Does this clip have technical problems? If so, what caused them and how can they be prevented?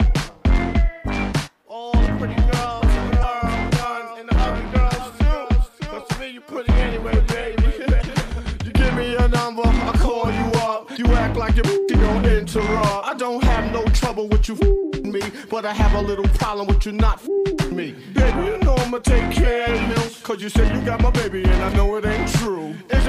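Yes. Damaged data in a compressed stream causes brief glitches at 3.22–3.24 s, 7.98–8.04 s and 10.93–10.99 s, where corrupted bytes made the decoder misread frames and lose sync. On a spectrogram each appears as a short disturbance; the waveform shows an abrupt discontinuity. Preventing it means delivering over error-checked transport and verifying file checksums before decoding.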